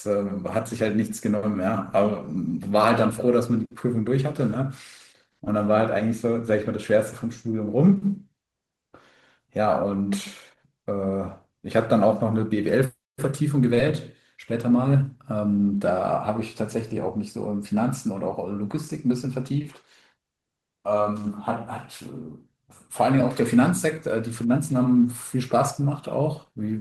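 Short concealed packet loss occurs three times in the speech: 0.57 to 0.59 s, at 5.45 s, and 13.74 to 13.78 s. About 10, 10 and 20 ms of audio arrived too late, and the decoder extrapolated the preceding sound before crossfading back, leaving brief smears or wobbles.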